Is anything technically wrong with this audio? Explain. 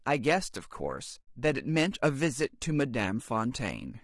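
Yes. Throughout the speech the voice sounds rough and grainy, with a hiss-like fill between the harmonics and a thin, somewhat synthetic upper band. This is likely low-delay AAC compression (AAC-ELD) at a modest rate, which fits roughly 32 kbps. Its short analysis frames cannot separate closely spaced pitch harmonics well, so the encoder spends bits inefficiently and smears noise into the gaps, and the damage is plainly audible.

From 1.21 to 1.27 s the sound fades out into a brief, soft-edged silence and fades back in. This is AAC frame loss with muting. Frames went missing and the decoder filled them with zeroed spectrum, so the overlapping windows taper the signal down and up rather than cutting it. The gap of about 60 ms fits three lost frames.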